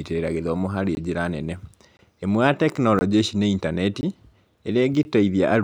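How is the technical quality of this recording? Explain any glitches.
The recording has one recurring glitch. Gap between chunks at 0.95–0.97, 1.97–1.99, 2.99–3.01, 4.01–4.03 and 5.03–5.05 s: the speech was delivered in 1.0 s chunks with 20 ms of silence inserted at each join. Nothing is lost, but the speech breaks into brief holes roughly once per second.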